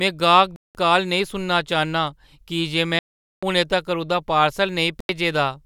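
Bluetooth dropouts at 0.56, 2.99 and 5.00 s cut this speech clip to silence for 0.19, 0.44 and 0.09 s. The sound resumes mid-stream, as at "काल नेईं सुनना", as if it had played on. The likely cause is audio packets arriving too late on the wireless link and being dropped.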